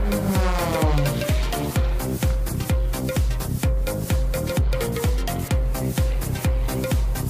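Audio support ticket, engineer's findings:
No audible faults found on review. Nothing to escalate on this ticket.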